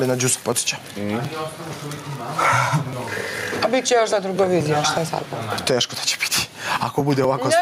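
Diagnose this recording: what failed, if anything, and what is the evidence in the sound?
Gain pumping sits at the analogue input and processing stage. Throughout the recording the gain swings by around 15 dB, and loud and soft passages end up squashed toward the same level. The likely cause is an input gain set far too hot for the microphone, with a fast limiter or compressor clamping down on every peak and releasing in between.

Periodic USB or driver dropouts point to the driver or buffer stage. From 0.52 s to 7.24 s there is a regular tick every 0.24 s, around thirty in all, heard only while signal is present. Each one is a skip of roughly 10 ms where audio is simply missing, so the waveform jumps across the gap. That even spacing suggests a background task stalling the USB bus or audio driver on a fixed schedule.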